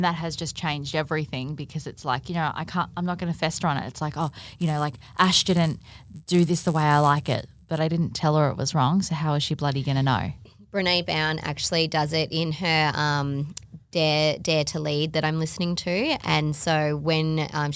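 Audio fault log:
4.19–7.79 s: resampler restarted on every block. Each 10 ms block went from 48 kHz to 16 kHz on its own, so every edge carries a small error. That gives a 100 Hz buzz under the speech. It stops just before "I didn't tell her".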